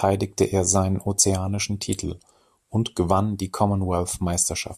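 From 2.04 to 3.11 s, after "er seinen ozeanischen", speech abruptly slows 5.7% and drops about a semitone, then snaps back. That points likely to a drift correction step, not gradual wow.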